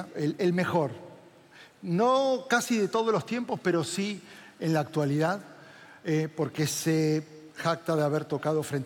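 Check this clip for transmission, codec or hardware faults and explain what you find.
Nothing faulty turns up anywhere in this recording.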